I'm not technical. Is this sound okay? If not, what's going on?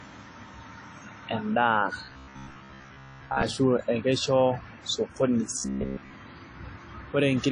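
No, it has two problems. The whole recording has a washy, ringing quality with a hiss that swells and fades along with the voice, and everything above about 10 kHz is missing, so it lacks crispness. That's most likely WMA compression: the file was squeezed hard to save space, and the encoder smeared and discarded fine detail to get there.

Then, from 2.05 to 3.43 seconds and again from 5.58 to 6.14 seconds, the voice turns into a stiff, metallic buzz, still roughly following the speech. That's robotic sound from repeated short buffers. The likely cause is that audio arrived too slowly, so the software kept replaying the last sliver, about 15 ms, which skipped most of the real sound and imposed a fixed hum near 67 Hz.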